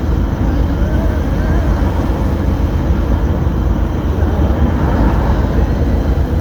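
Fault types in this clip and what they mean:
Nothing stood out as a technical fault on listening to this recording of sounds.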